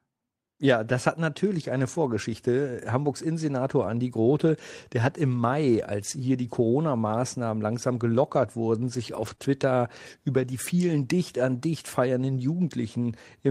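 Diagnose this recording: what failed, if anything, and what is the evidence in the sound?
Lost packets rebuilt from error correction occur at 0.89 to 0.91 s, 9.15 to 9.33 s and 9.40 to 9.46 s, at the network stage. There is no gap, just brief rougher, noisier stretches. The decoder played the low-bitrate copies carried in following packets, so the audio continues, unlike concealment's guessed fill.

A short concealed packet loss sits between those repairs, at 9.35 to 9.40 s, also at the network stage. About 20 ms never arrived and had no backup copy, so the decoder extrapolated the preceding sound and blended back, producing a smear or wobble rather than the coarse but continuous audio of the rebuilt frames.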